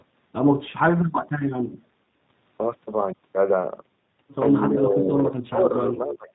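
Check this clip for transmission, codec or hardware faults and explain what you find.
Two faults are audible in this speech: G.729 coding over the whole clip, and a stretch of suppressed speech near the end.

G.729 codec, throughout: the speech has been coded at 8 kbit/s by a model-based codec that resynthesises each 10 ms frame from a vocal tract filter, a pitch predictor and a few excitation pulses. Nothing survives above 4 kHz, so the sound is muffled and narrowband. The coding damage is plainly audible as a rough, slightly synthetic buzz on the voice.

Speech suppressed in double talk, 4.69 to 5.75 s: the level falls by roughly 25 dB at its deepest and the speech is turned down for about a second. This is likely an echo canceller that heard both ends talking at once, could not tell the near talker from loudspeaker echo, and attenuated everything to be safe. Full level returns at 5.75 s.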